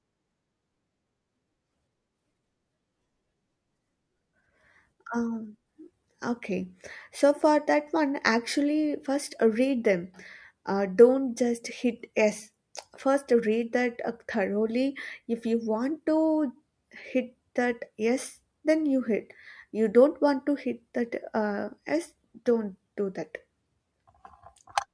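Nothing stood out as a technical fault on listening to this speech recording.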